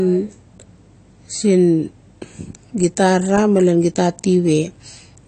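A speech recording that sounds dull and smeared from start to finish, with nothing above about 8.6 kHz and a fizzy, warbling edge on sibilants and held sounds. This is likely AAC compression, with AAC-LC coding at a low bitrate around 32 kbps lowering the cut-off and thinning the spectrum.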